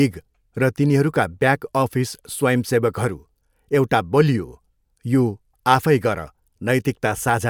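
No dropouts, distortion, timing errors or other technical faults occur anywhere in this recording of speech.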